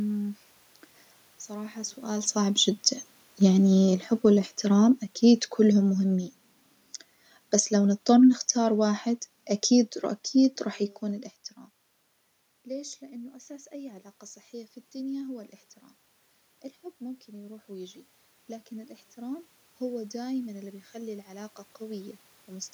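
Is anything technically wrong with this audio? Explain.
Yes. From 2.35 to 6.3 s, and again from 7.6 to 10.67 s, the speech and the room noise behind it sink together, by about 6 dB and then about 4 dB. That is automatic gain falling: the gain control judged the input too loud and eased its gain down.

From 17.0 to 22.69 s the speech and the background swell together over several seconds, by about 7 dB. That is automatic gain rising: the control judged the input too quiet and gradually raised its gain, lifting the room noise along with the speech.

The level shifts around 2 s and around 11 s come from the talker moving relative to the microphone, not from the system.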